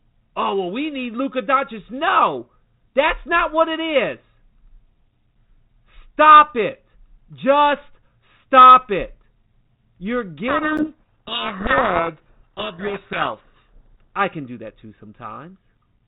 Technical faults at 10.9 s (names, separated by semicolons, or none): codec payload misread